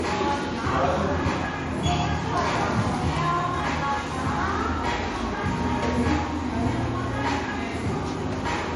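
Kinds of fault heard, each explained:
Low-bitrate audio saved at a high bitrate: Nothing is present above about 11.2 kHz, with coding artefacts from the first encoding throughout, which fits a low-bitrate MP3 likely re-encoded at a much higher bitrate. The larger second encoding cannot restore the detail the first discarded.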